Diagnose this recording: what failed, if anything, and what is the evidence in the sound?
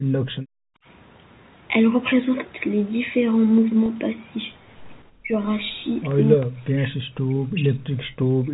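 Call processing failed at the start. From 0.0 to 0.85 s the background is gated by the echo canceller. The room sound drops by about 40 dB for most of that stretch. The canceller clamped the microphone while the loudspeaker played, then released it.

The network dropped audio at 3.86 to 3.88 s. This is packet loss with pitch repetition. The 20 ms gap, which points to one lost packet, is filled by a briefly held, buzzy tone. The receiver repeated the last pitch period to bridge it.

Speech dips sharply at 5.21 to 5.33 s, 6.36 to 6.96 s and 7.12 to 8.44 s, each time by roughly 40 dB. The likely cause is speech suppressed in double talk. In call processing, the echo canceller mistook the talker for loudspeaker echo and turned everything down.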